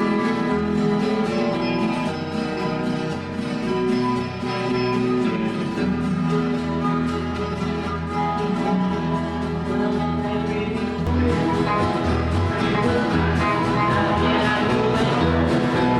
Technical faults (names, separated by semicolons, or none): channel delay (comb filtering)